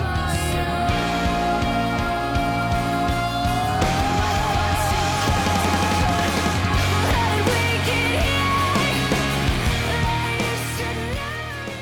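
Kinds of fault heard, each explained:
No audible technical faults anywhere in this recording.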